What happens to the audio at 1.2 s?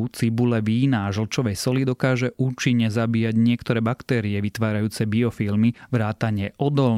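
Nothing goes wrong at 1.2 s: the speech carries on intact there, with no dropout, click, glitch or other audible fault.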